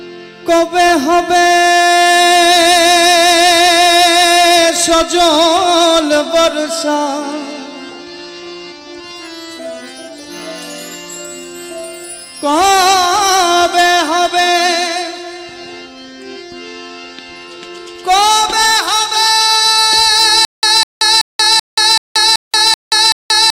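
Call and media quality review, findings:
Stutter with silent gaps from 20.45 s to the end. A 201 ms burst repeats 8 times, each followed by about 180 ms of dead silence, roughly every 380 ms. Likely a stalled player or stream replaying its last fragment on each retry, so the real audio's gone.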